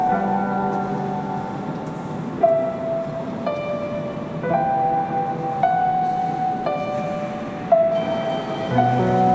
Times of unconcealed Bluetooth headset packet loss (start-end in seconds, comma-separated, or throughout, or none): none